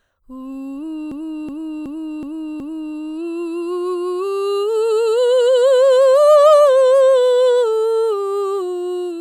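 A system hang loop runs from 1.12 to 2.97 s: the system stalled while the audio hardware kept replaying one ring buffer, so a 0.37 s slice of music repeats five times, about 2.69 per second, as a stuttering machine-gun effect. That loop length fits a 16,384-sample buffer at 44.1 kHz.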